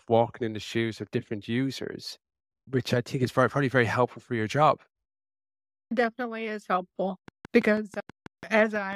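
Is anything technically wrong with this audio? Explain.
Yes. From 7.28 to 8.94 s, right after "is helpful", a train of clicks runs at a steady six or so per second, about ten in all, peaking near the speech level. Likely cause: interference or a faulty connection or power supply injecting repeated pulses. It sounds like regular ticking over the speech.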